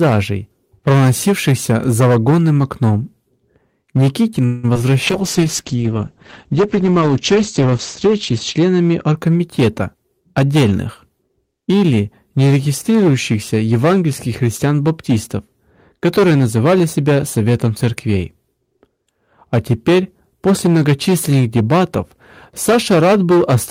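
Throughout the speech, an earlier stage was driven about 14 dB beyond its limit, causing hard clipping that flattens around a tenth of samples and leaves a harsh fuzz on every loud syllable. From 4.45 to 4.65 s there is a call audio freeze, likely from delayed packets draining the jitter buffer. The receiver stretches the last sound into a fading buzz for about 180 ms before the speech resumes, now running later. At 4.73 to 4.77 s, about 20 ms never reached the decoder. This short concealed packet loss is patched by continuing the preceding sound, heard as a brief smear. From 5.08 to 9.23 s a call bitrate drop takes the encoder from 48 to 10 kbps, holding the lowest rate for about 3.3 s and narrowing the bandwidth from 20 kHz to 8 kHz, so the speech turns muffled and watery. From 9.47 to 11.31 s a jitter buffer speed-up trims about 150 ms in small pitch-period pieces, so the speech runs at 108% speed at unchanged pitch and sounds hurried.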